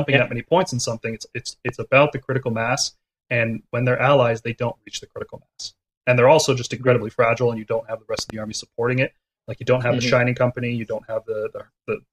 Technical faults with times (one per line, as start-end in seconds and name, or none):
1.69-1.71 loud pop
8.19-8.32 loud pop